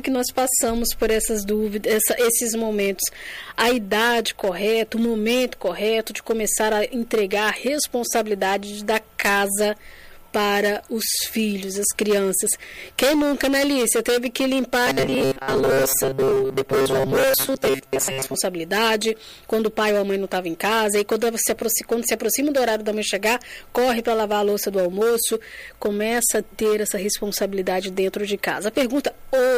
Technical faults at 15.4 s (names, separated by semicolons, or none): robotic sound from repeated short buffers